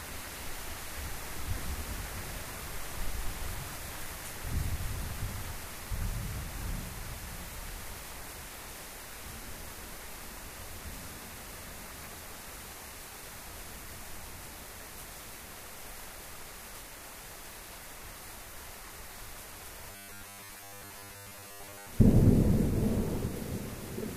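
From 19.91 to 21.90 s the sound turns into a rigid, metallic 100 Hz buzz, a robotic sound from repeated short buffers. Most of that stretch is likely the same 10 ms slice looped while fresh audio was skipped, so only the rough shape of the original survives.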